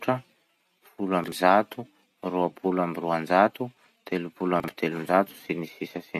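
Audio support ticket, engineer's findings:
Chunks out of order, 1.24–1.32 s: two adjacent 40 ms blocks swapped, the late one playing after its successor. Brief jumbled blip in the speech, three hard joins. Nothing dropped. Probably the buffer/queue stage writing a block late.

Same again, 4.60–4.68 s: 40 ms chunk one slot late, same garble. Consistent 40 ms size points at the same chunking path.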